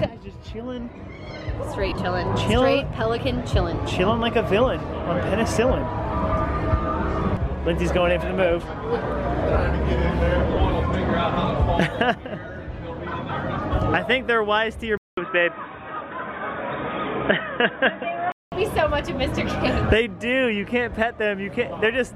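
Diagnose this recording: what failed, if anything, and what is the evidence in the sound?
At the Bluetooth link stage, LE Audio frames were lost at 1.89 to 1.98 s and 10.54 to 10.57 s. The LC3 decoder concealed each gap by replaying the last spectrum with scrambled signs, which smears the sound into brief noisy blurs.

At 14.97 s the input was likely switched to a poorer device. After a 200 ms silence, the band stops at 3.8 kHz and new background noise sits about 45 dB down at the same level, until 18.52 s.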